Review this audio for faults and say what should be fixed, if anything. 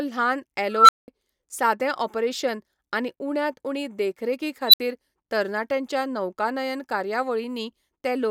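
There's an unstable filter going off twice in this speech. From 0.73 to 1.08 s a tone around 1.5 kHz swells over about 163 ms, clips, then drops to 192 ms of silence. At 4.67 to 4.80 s it happens again near 4 kHz, building in about 61 ms with 64 ms of dead air after. A recursive filter's feedback is running away until the numbers overflow and it resets. Validate coefficients so the poles stay inside the unit circle before they're loaded.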